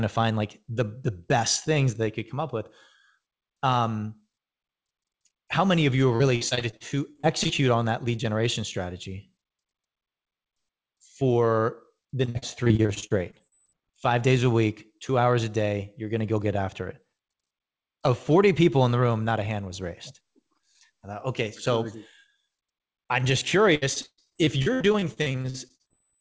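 Repeated packet loss (robotic sound) hits the speech at 6.16–7.51 s, 12.25–13.75 s and 23.75–25.92 s. Short holes, none longer than about 55 ms except one of about 120 ms in the last stretch, keep getting patched by stretching the preceding sound, so roughly a fifth to nearly a third of each span is filler. That produces choppy sound with pieces missing rather than the clean silences of a single dropout. Throughout the clip nothing is heard above 8 kHz, which fits a wideband call codec such as G.722.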